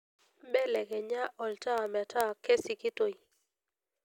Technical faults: word clock ticks

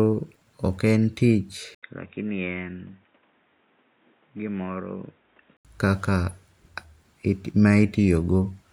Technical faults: input switched to a poorer device

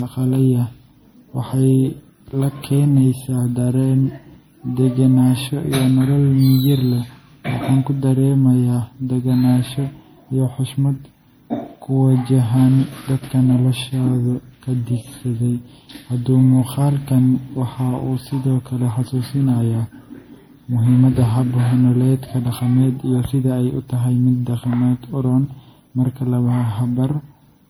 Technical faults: generation loss

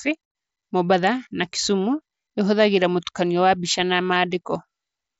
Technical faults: concealed Bluetooth headset packet loss

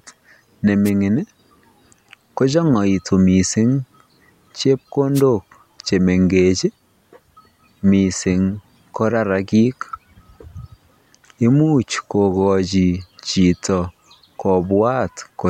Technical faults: wireless microphone noise hit

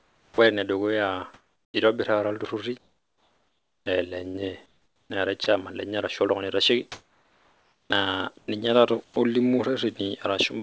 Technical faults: comfort noise in place of the background; onset clipped by the voice detector; sound chopped by the voice detector

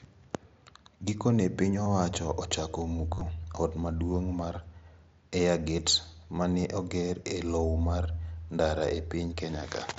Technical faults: concealed Bluetooth headset packet loss

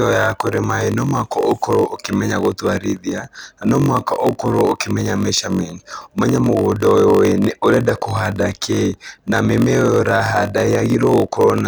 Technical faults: block size mismatch (padded)

